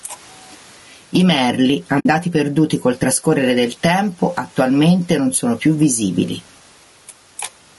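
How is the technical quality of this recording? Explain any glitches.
The recording has three audible faults: level pumping throughout, rough codec coloration throughout, and one brief dropout near 2 seconds.

Gain pumping runs through the whole clip. Gain set too high is likely pulled down by a fast limiter on each loud syllable, so the level swings by around 10 dB.

Low-delay AAC compression is the likely cause of the grainy, rough speech heard throughout. Short AAC-ELD frames resolve pitch harmonics poorly, leaving noise between them and a synthetic-sounding top band, which fits a low bitrate near 32 kbps.

AAC frame loss with muting occurs from 1.99 to 2.06 s, between "I merli" and "perduti col trascorrere del". The decoder zeroed the missing spectrum, and the overlapping windows fade out and back in, leaving a soft-edged 60 ms hole.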